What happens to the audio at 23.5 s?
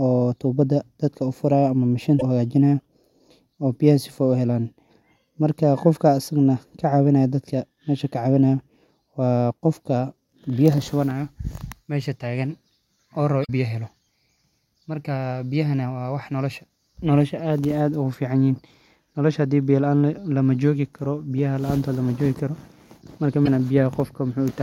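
Just before that point, from 23.42 to 23.48 s, there is damaged data in the compressed stream. For about 60 ms the decoder meets corrupted bytes it cannot parse correctly. It misreads those frames, loses its place, and hunts for the next valid frame header. The result is a brief chirp, squawk, click or short hole cutting across the speech.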